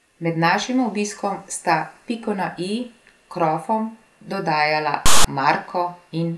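Right after "krofom dodajala", at 5.06 s, there's about 0.19 s of file tags played as audio. A block of text metadata got read as samples, so you hear a loud, lopsided rasp, shoved off to one side, that starts and stops with hard edges.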